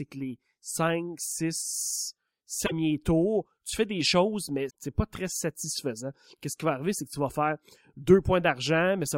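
At 2.63–2.72 s, after "que les cinq six", and at 4.66–4.71 s, before "c'est pas très satisfaisant", damaged data in the compressed stream makes the decoder misread frames and resync, giving brief glitches. Spectrograms show short broadband smears; waveforms show abrupt discontinuities.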